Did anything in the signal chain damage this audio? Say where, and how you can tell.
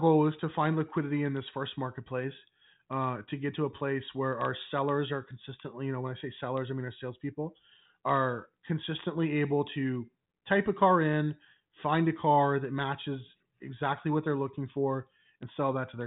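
No, nothing damaged it.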